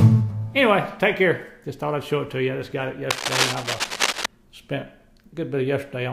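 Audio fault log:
3.10–4.26 s, cable scratch noise: a dense, irregular scratching and rustling sits over the sound for just over a second, only slightly quieter than the sound itself. The likely cause is a worn cable, connector or control shifting, its contact resistance fluctuating rapidly.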